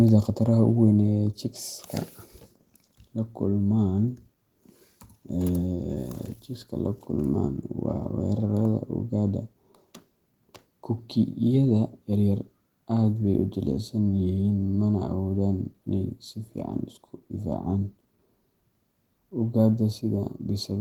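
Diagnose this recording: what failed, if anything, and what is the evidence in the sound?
Nothing in this speech recording has failed at any stage. The Opus voice compression is working as intended, with the band kept open to about 20.2 kHz and only light coding traces, which fits hybrid mode at around 20 kbps.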